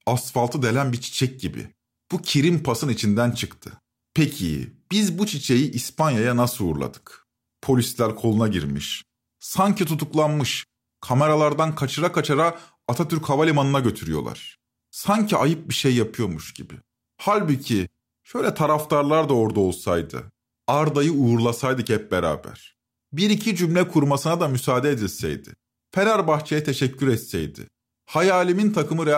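No technical faults can be heard at any point in the speech.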